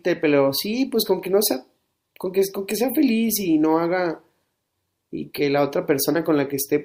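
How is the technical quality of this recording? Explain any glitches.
No glitches or technical faults can be heard here.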